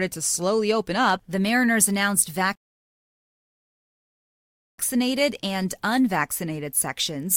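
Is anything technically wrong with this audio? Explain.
Yes. From 2.55 to 4.78 s there is a rebuffering stall: playback ran dry, went silent, then resumed exactly where it stopped, adding 2.23 s.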